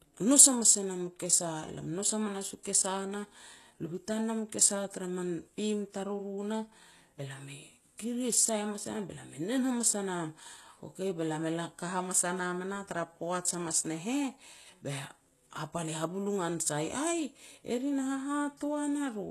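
Speech throughout, with nothing above 12.3 kHz for the full length and the smeared, swirly texture of a very low-bitrate encode, despite the file being a high-bitrate MP3. This is low-bitrate audio saved at a high bitrate, likely from a 16 kbit/s HE-AAC source. The re-encode cannot restore the missing band or undo those artefacts.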